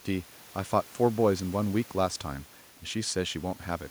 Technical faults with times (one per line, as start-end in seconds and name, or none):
none